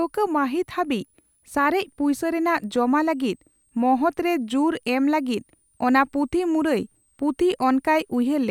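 A faint high whistle, a switching supply whistle, sits under this speech throughout, wandering between about 7.7 and 10.3 kHz and roughly 45 dB below the voice. A switching power supply is running in audible burst mode or beating with another one, and on a spectrogram it shows as a thin, drifting line near 10 kHz.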